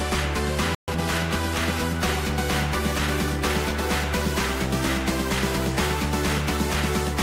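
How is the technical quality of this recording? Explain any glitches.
Two linked playback faults affect the opening second.

At 0.75 s the sound cuts out for about 130 ms, resuming at 0.88 s. This playback stall is likely caused by the player's buffer running empty or its output thread being blocked, leaving silence until data flowed again.

From 0.88 to 1.0 s comes time-compressed catch-up: the player works off its accumulated backlog by dropping and cross-fading short slices, running at 2.0x speed. The audio sounds rushed but keeps its normal pitch.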